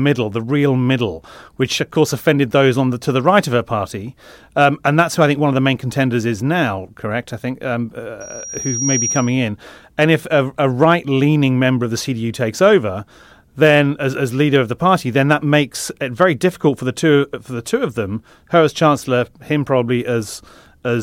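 From 8.20 to 9.43 s, after "I think um", a piercing tone near 5.7 kHz swells over about three quarters of a second to roughly the level of the speech, then stops before "and if a a". This is loudspeaker feedback squeal: the microphone hears its own loudspeaker, and at that frequency the loop gain exceeds one.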